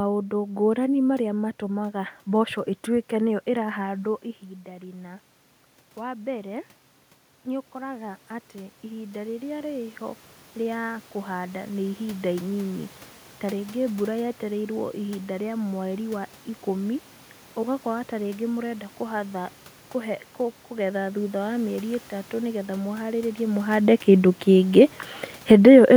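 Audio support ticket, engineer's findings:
Automatic gain rising, 3.73–12.92 s, after "matũmaga mboco ĩtuĩke nĩyo", ending before "ta rĩngĩ". Talker moved back near 4 s, dropping input about 15 dB. AGC slowly adds about 13 dB, so voice and room noise swell together.

Automatic gain falling, 25.36–25.73 s, after "mũharĩrĩe mũhande kĩndũ kĩngĩ". AGC sensed excess level and pulled gain down about 3 dB within roughly 0.4 s. Speech and background sink together, pointing to gain control, not the talker.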